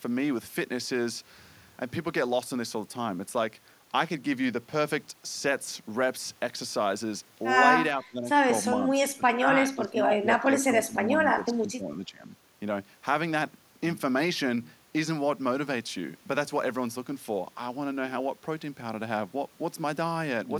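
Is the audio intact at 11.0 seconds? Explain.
No. At 11.0 seconds the speech is still inside a stretch of speech suppressed in double talk, running from 10.44 to 11.08 s. The voice sinks by roughly 20 dB at its deepest, across about half a second in total. This is likely an echo canceller turning down the near talker along with the loudspeaker echo while both sides spoke at once. On a waveform the envelope visibly shrinks there, and a spectrogram shows the energy fading across the band.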